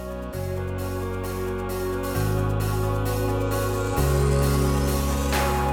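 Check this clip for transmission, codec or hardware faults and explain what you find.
No transmission, codec or hardware faults can be heard here.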